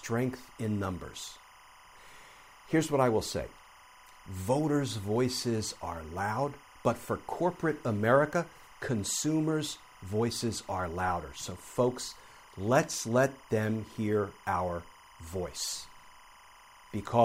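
A speech recording with timecode bleed running the whole way through: a chirpy warble sitting roughly 25 dB under the voice, flipping between pitches around 1 and 2 kHz. That's 25-frame linear timecode leaking over from a neighbouring track or cable.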